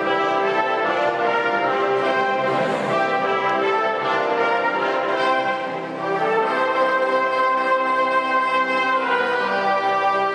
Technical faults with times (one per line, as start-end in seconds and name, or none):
6.37 compressed frames skipped
9.06 compressed frames skipped